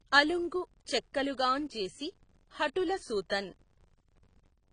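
Filter restarted on every block, throughout the clip: a buzz at about 93.8 Hz rides under the speech, rising and falling with its level. The filter loses its memory between blocks and restarts from silence, so each block opens with a small tick, a rate that fits a 512-sample buffer.

AAC compression, also throughout: the speech sounds dull and smeared, with nothing above 9.7 kHz and a plainly audible warbling, fizzy texture on sustained sounds and sibilants. This is likely AAC-LC at a low bitrate, around 24 kbps, where the encoder lowers the cut-off and starves the upper bands.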